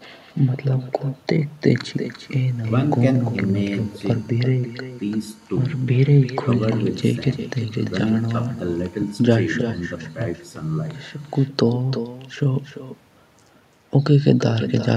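Speech with echo and no canceller throughout: each phrase returns roughly 300 ms later, about 13 dB quieter and thinner, a discrete repeat rather than reverb's smooth decay.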